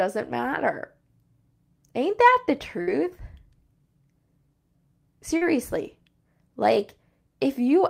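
At 2.81 s a burst of packet loss cuts out about 60 ms of speech. The receiver papers over the hole for roughly 57 ms by extending the last sound and fading it, so a held, dimming sound sits until 2.89 s and the speech jumps ahead.

At 5.37 s a short concealed packet loss drops about 40 ms that never arrive in time. The decoder synthesises a 40 ms continuation and then blends back into the real signal at 5.43 s, leaving a brief smear in the speech.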